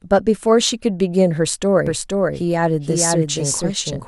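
A doubled audio track starts abruptly at 1.87 s and runs to the end: a full-band second copy of the speech trails about half a second behind, around 5 dB quieter, with no decay or room colour. The likely cause is a slower second capture path mixed in.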